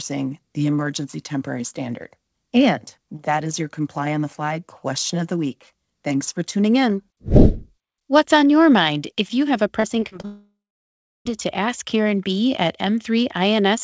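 Repeated packet loss (robotic sound) runs from 9.80 to 10.25 s. Four short gaps, the longest about 33 ms, are each filled by extending the preceding sound. That patching covers about a fifth of this span and makes the speech choppy.

A long network dropout follows at 10.25 s and lasts until 11.27 s. The last sound trails off as a fading buzz or hiss, then about 0.68 s of silence remains. This is likely an interruption in arriving audio, and the speech resumes afterward with that stretch missing.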